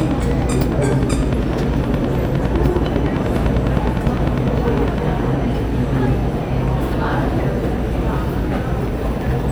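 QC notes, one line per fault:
0.01 to 4.99 s, train of clicks: a steady ticking at about 9.9 clicks per second, roughly fifty in all, each with much the same shape and poking out some 10 dB over the sound. It's likely interference from nearby gear or a faulty connection or power supply.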